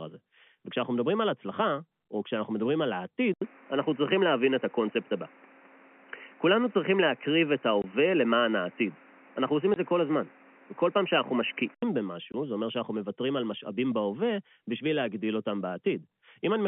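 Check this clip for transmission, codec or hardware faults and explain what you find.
Two kinds of fault are present: an input switched to a poorer device, and packet loss filled with silence, all carried over G.711 A-law telephone coding, whose 150 Hz to 3.4 kHz line band is audible throughout.

Input switched to a poorer device, 3.34 to 11.83 s: the capture most likely changed to a lesser microphone or headset profile. After an 80 ms silence, the audio narrows to nothing above 3 kHz, turns dull, changes level by around 5 dB, and gains background noise roughly 30 dB below the signal.

Packet loss filled with silence, at 7.82 to 7.84 s, 9.74 to 9.76 s and 12.32 to 12.34 s: each time, one packet's worth of audio went missing and the receiver inserted silence. Each 20 ms hole, which fits a 20 ms packet, cuts the sound abruptly with hard edges.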